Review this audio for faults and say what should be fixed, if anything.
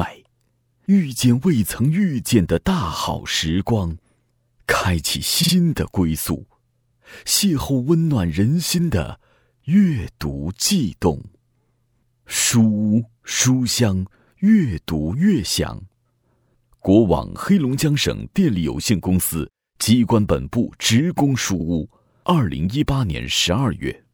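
Repeated frames at 5.42 s (a 52 ms block played twice more, adding 105 ms) and 21.59 s (played once more, adding 52 ms) cause a stuttering replay. Unlike a dropout, nothing is lost, and the clip becomes longer. The block length fits two compressed frames. Check the encoder's output writing or the transport's retransmission handling so that no frame is written or sent twice.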